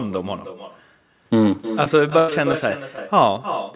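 Speech carried over a call line, band-limited to nothing above 4 kHz by the codec, with echo and packet loss. An echo with no canceller runs through the whole clip. Each phrase returns about 300 ms later, roughly 10 dB quieter and thinner. The far end's loudspeaker fed its microphone, and nothing removed that copy. From 1.84 to 2.54 s there is repeated packet loss with a robotic sound. Five gaps occur, the longest 90 ms. The receiver patched each hole by stretching the last sound, so about a fifth of that stretch is synthetic and choppy. At 2.96 to 2.98 s a short concealed packet loss leaves a brief smear or wobble. About 10 ms of audio arrived too late and was filled in before the decoder blended back into the real signal.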